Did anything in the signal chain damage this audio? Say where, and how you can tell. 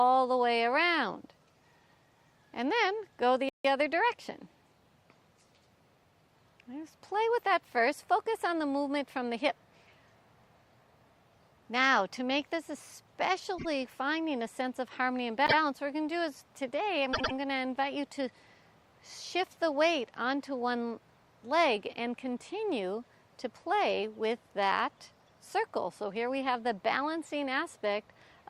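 Yes, at the codec stage, where compressed frames were written or sent more than once: repeated frames. The stutters are at 3.49 to 3.65 s, where a 52 ms block plays three extra times, and at 13.57 to 13.65 s, where a 26 ms block repeats twice. At 15.45 to 15.56 s a 104.5 ms block repeats once, and at 17.13 to 17.33 s it repeats twice. Every block is a multiple of about 26 ms, which fits whole codec frames being replayed. On the waveform and spectrogram, the same segment appears back-to-back, and the clip runs about 0.52 s longer.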